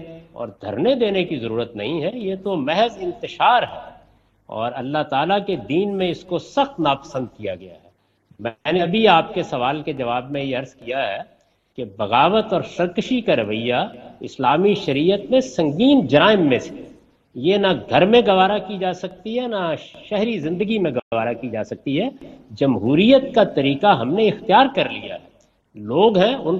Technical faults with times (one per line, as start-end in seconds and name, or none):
20.99-21.12 playback stall
21.12-21.94 time-compressed catch-up